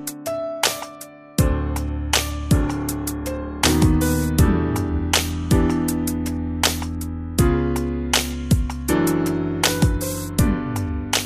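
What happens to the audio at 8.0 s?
Nothing goes wrong at 8.0 s; the audio plays through that moment intact, with no dropout, click, glitch or other fault.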